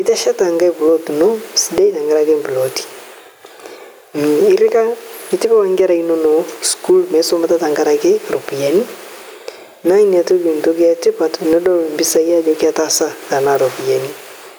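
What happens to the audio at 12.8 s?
At 12.8 s the gain pumping that runs through the whole clip is present: the gain swings by around 10 dB, pulled down under loud speech, so loud and soft parts sit closer in level and the sound is squashed. Likely excessive input gain hitting a fast limiter. Unlike a noise gate, nothing cuts to silence.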